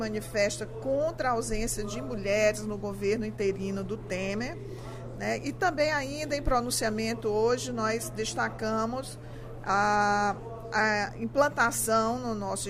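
No technical faults can be heard anywhere in the audio.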